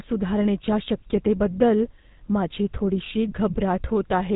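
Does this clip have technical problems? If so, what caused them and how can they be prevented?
Yes. The speech carries GSM full-rate codec damage from start to finish. The bandwidth stops at about 3.8 kHz, so the top end is missing. The codec models the vocal tract as a filter. It excites that filter with evenly spaced pulses and discards two of every three excitation samples. The result is a plainly audible buzzy, gravelly roughness, which fits the 13 kbps full-rate mode. Prevent it by capturing the speech directly rather than through a GSM call path.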